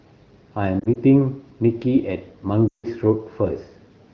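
From 0.80 to 0.98 s, scattered lost AMR speech frames, each about 20 ms, make brief warbles as the decoder reuses old parameters. They show as short smeared patches in the spectrogram. From 2.68 to 2.86 s, a continuous run of lost frames drops the sound to near silence within two frames, which fits a block of about 160 ms concealed in the clear wideband coding. The waveform envelope shrinks to flat there.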